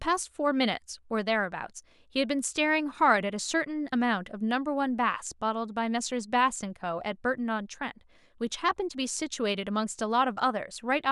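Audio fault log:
The speech signal holds steady and continuous throughout, with no technical faults detected.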